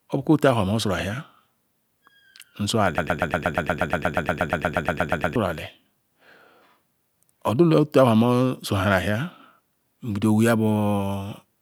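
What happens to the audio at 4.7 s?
At 4.7 s the speech is stuck in a broken-record loop running from 2.98 to 5.36 s: a 0.12 s fragment repeats back to back about 20 times, likely from a stalled player or stream resending its last buffer, and the intended audio is lost.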